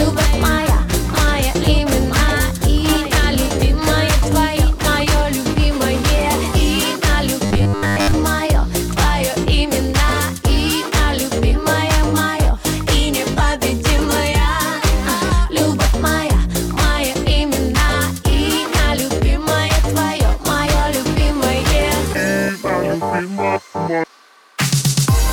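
The audio opens with a doubled audio track already under way: from the start to 5.04 s, a second full-band copy of the same sound trails the original by about a second and a half, roughly 5 dB quieter, with no decay or room colour of its own, and it cuts off abruptly at 5.04 s. The likely cause is the signal being captured a second time through a slower path, or an edit leaving two copies out of step. On a waveform, each burst of energy reappears as a smaller twin at that fixed offset. On a spectrogram, the whole pattern is duplicated and shifted right, then ends on a hard vertical edge. From 7.46 to 8.14 s there is a robotic sound from repeated short buffers, a rigid metallic buzz pitched at 100 Hz that loosely tracks the underlying sound. That rate fits a 10 ms chunk being looped, likely because new audio was arriving too seldom, so most of the real signal in that span is skipped and replaced by repeats. 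A spectrogram would show evenly spaced horizontal harmonics at multiples of 100 Hz replacing the natural detail. A zoomed waveform would show the same short cycle copied over and over.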